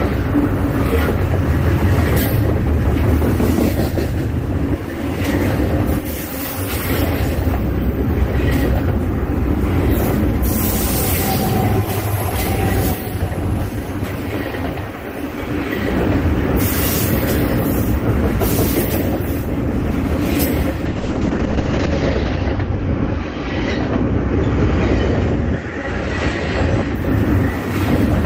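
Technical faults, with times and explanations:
20.86–27.01 s, call bitrate drop: the audio turns rough and watery, and the top end dulls as the audio bandwidth narrows from 20 kHz to 8 kHz, at its worst for about 1.03 s before it recovers. The call's bandwidth estimate fell, so the Opus encoder was given far fewer bits, which fits a fall from 32 kbps to 8 kbps. It quantised more coarsely and cut the high frequencies to save bits.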